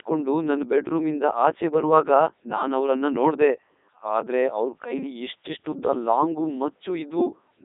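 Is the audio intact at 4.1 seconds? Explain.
No. The speech at 4.1 seconds, like the whole clip, has passed through a Codec 2 vocoder, which fits its top 3.2 kbit/s mode. Only pitch, voicing, energy and spectral envelope survive, and sine-wave resynthesis confined to 250 Hz to 3.7 kHz, with nothing above 3.8 kHz, leaves it heavily robotic and buzzy.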